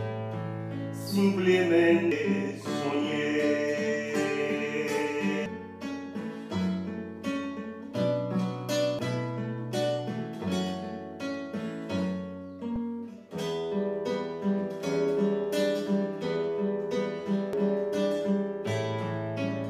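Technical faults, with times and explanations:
2.12 s, 5.46 s, 8.99 s, 12.76 to 12.79 s and 17.53 s: damaged data in a compressed stream. At each point the decoder hits corrupted frames it cannot read properly, loses sync and hunts for the next valid frame header, so the sound breaks into a brief chirp or blip.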